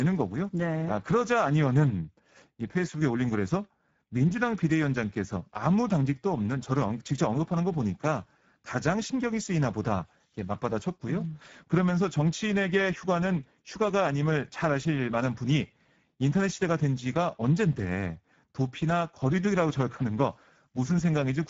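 Throughout, the speech was squeezed through the Speex codec at a low setting that fits roughly 10 kbps, leaving it hoarse and noisy, with nothing above 7.7 kHz.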